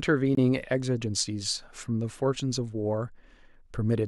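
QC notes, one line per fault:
0.35–0.39 s, corrupt frame muted: a compressed frame arrived with flipped bits, the decoder rejected it, and the player substituted silence for its full duration rather than stalling. The result is a gap of about 36 ms that cuts in abruptly and ends just as sharply when the next intact frame resumes. That length fits a single lost frame, and because silence fills the slot exactly, the timing of the speech on either side stays aligned.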